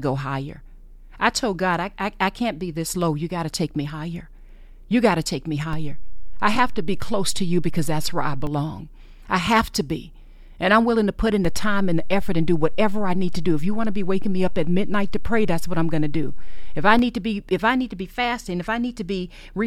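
The waveform's zero line jumps in a DC step twice. The first shift, of about -20 dBFS, comes after "got to take me" and lasts from 5.73 s to 8.47 s. The second, of about -18 dBFS, runs from 11.45 s after "willing to put in" until 16.99 s, before "need to be if". Each jump is heard as a low thump while the speech continues unchanged.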